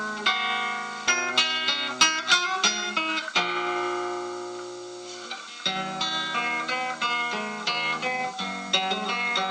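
At 1.07 to 1.09 s there is a skip ahead. About 0.7 s of sound was dropped, and playback jumps straight across the join with no gap.

From 2.11 to 3.34 s comes a jitter buffer speed-up. Short pitch-period pieces, about 50 ms in all, are cut. The sound runs at 103% speed without changing pitch.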